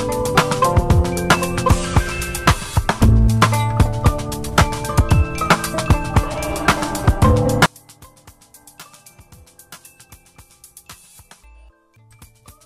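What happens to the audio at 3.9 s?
Nothing goes wrong at 3.9 s; the audio plays through that moment intact, with no dropout, click or other disturbance.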